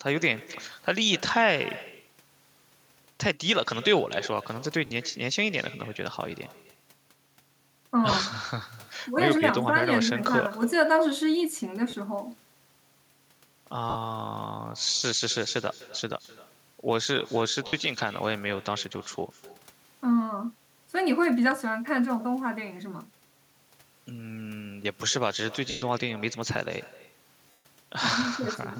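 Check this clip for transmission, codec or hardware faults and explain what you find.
Two faults are audible: a steady echo with no canceller, and seven short dropouts from lost LE Audio frames.

The echo runs through the whole clip. Every phrase comes back roughly a third of a second later, about 19 dB below the speech. The far end is playing the call on a loudspeaker, its microphone picks that up, and nothing cancels it, so the talker's own speech returns after the network round trip as a quieter, thinner copy. The fixed delay and distinct repeat set it apart from room reverberation, which decays smoothly with no gap.

The lost LE Audio frames fall at 4.86 to 4.91 s (50 ms), 8.11 to 8.13 s (20 ms), 11.90 to 11.93 s (30 ms), 13.90 to 13.95 s (50 ms), 17.67 to 17.73 s (60 ms), 25.70 to 25.82 s (120 ms) and 27.51 to 27.65 s (140 ms). In each, the LC3 decoder fills the gap by reusing the last good spectrum with randomised signs, so voiced sound turns into a brief noisy smear. 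In the two longer losses that smear fades gradually toward silence. A hard packet-loss gap, by contrast, drops straight to silence or clicks.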